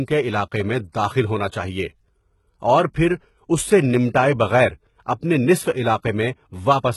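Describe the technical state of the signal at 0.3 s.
At 0.3 s the speech carries heavy HE-AAC compression damage, present for the whole clip and likely from a very low-bitrate encode, around 16 kbps. The treble is rebuilt by copying lower bands upward, so sibilants sound gritty and metallic rather than dull, with nothing above about 11.8 kHz.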